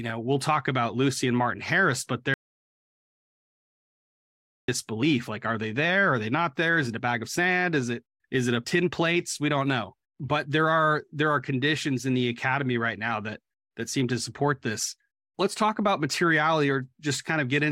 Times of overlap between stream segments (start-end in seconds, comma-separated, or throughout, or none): none